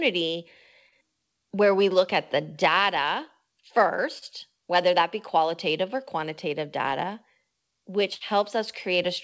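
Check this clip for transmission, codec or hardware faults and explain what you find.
Two kinds of packet loss are audible in this speech, heard through a wideband call codec with nothing above 8 kHz, which fits G.722 at 64 kbps.

Short concealed packet loss occurs at 0.89 to 0.94 s, just before "where we look at", and at 4.18 to 4.25 s, before "whether that be qualitative". About 30 ms never arrived. The receiver extended the preceding sound to fill it, leaving a brief smear.

A burst of packet loss occurs at 8.15 to 8.23 s. About 60 ms went missing. Concealment held and faded the last sound, then the audio resumed with that stretch lost.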